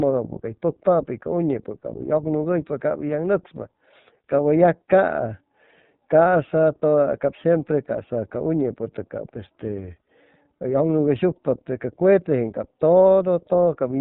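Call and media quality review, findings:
iLBC codec, throughout. Speech band-limited, nothing above 4 kHz. Clearly rough, slightly synthetic texture. Each 30 ms frame coded independently, no carry-over from the previous one. Roughness fits a rate near 13.3 kbps. Component: narrowband VoIP codec in the call path.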